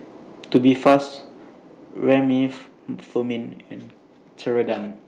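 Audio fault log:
0.55–0.96 s and 2.10–2.15 s, microphone overload: the loudest peaks are flattened, giving a harsh, crackly edge. It is heavier in the first span, where the level runs about 7 dB past full scale and a few percent of samples are cut off, than in the short second span at about 1 dB over. Codec roughness is a steady haze, but this grit appears only on peaks, likely from an input volume set too high for the converter.
0.57 s and 2.58 s, microphone volume stepped down: the whole signal, background included, drops at once. The drop is about 2 dB at 0.57 s, inside the first distorted stretch, and about 4 dB at 2.58 s, shortly after the second. A fade would slope and an automatic level control would drift back up, but these are single abrupt steps that stay down, likely the call software cutting the device's input volume after sensing overload.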